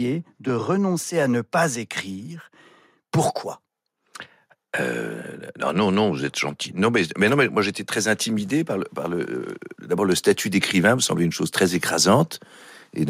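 A speech recording with automatic gain rising from 5.72 s to 8.97 s. Over those three and a quarter seconds the whole level climbs by about 4 dB as the gain control, judging the input too quiet, slowly turns itself up. The voice and the background noise swell together at the same steady rate, which separates it from compressor pumping, where the background surges in quick bursts between syllables rather than rising in one slow ramp.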